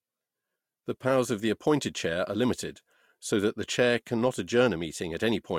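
No technical faults can be heard anywhere in this speech clip.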